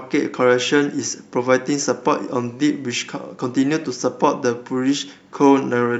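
No technical faults can be heard anywhere in this speech recording.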